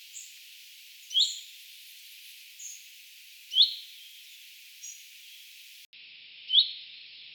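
The input likely switched to a poorer device at 5.85 s. After a short gap of about 80 ms, the sound runs to the end with nothing above 5.4 kHz, turning duller and boxier at roughly unchanged level, over a faint new noise floor.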